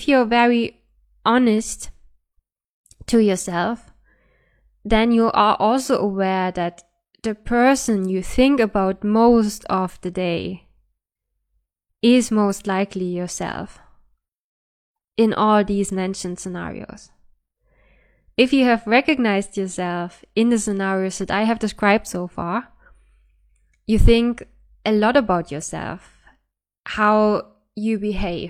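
No technical faults are audible.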